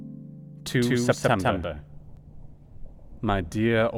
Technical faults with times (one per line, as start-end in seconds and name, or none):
0.67-2.17 doubled audio track